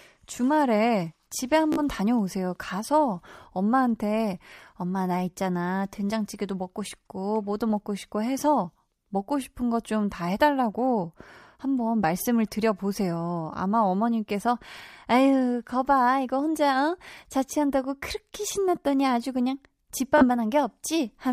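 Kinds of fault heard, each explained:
Bluetooth stutter: at 1.73 to 1.80 s and again at 20.18 to 20.25 s, the speech breaks into a short buzzy stammer as a tiny fragment repeats. Audio packets over the wireless link arrived late or not at all, so the receiver replayed its last buffer until fresh data came. About 46 ms is lost in the first and 31 ms in the second, which fits three and two dropped packets. The speech then resumes further on, as if it had kept playing.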